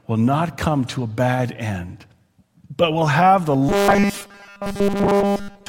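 From 3.69 s to the end of the clip at 5.69 s, right after "but will have the", the speech collapses into robotic sound from repeated short buffers. It's a rigid, metallic buzz pitched at 200 Hz that still loosely tracks the words. The likely cause is fresh audio arriving too seldom, so the software keeps looping a 5 ms slice (one over 200 Hz) and skips the real signal. Essentially all of that stretch is repeats.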